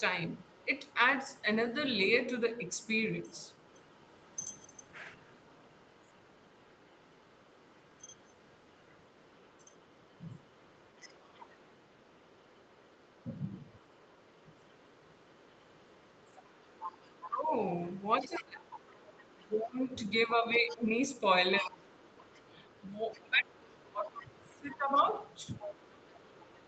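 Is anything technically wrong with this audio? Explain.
Yes, two problems, both the kind you get on a speakerphone call.

Other side's voice leaking through: from 0.29 to 17.29 s there's a very faint second voice underneath, and from 18.21 s to the end it gets noticeably louder. It's likely the far end playing from the loudspeaker and the echo canceller not fully scrubbing it from the mic.

Speech suppressed in double talk: between 17.28 and 21.91 s, and again from 23.23 to 25.71 s, the main voice dips by roughly 20 dB in patches, about two seconds and a second and a half in total. Likely both sides talk at once, the canceller can't tell them apart, and it turns everything down.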